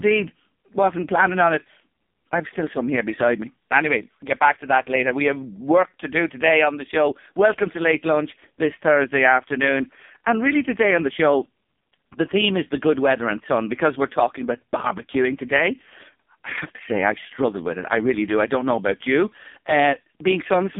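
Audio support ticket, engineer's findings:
AMR narrowband mobile codec (AMR-NB) in the path, whole clip. Speech squeezed through 8 kHz-rate vocal-tract model, few pulses per subframe; heavy damage fits the lowest mode, around 4.75 kbps. Result: band limited to 200 Hz–3.6 kHz, nothing above 3.6 kHz, voice buzzy and synthetic, thin low end, dull and boxy throughout.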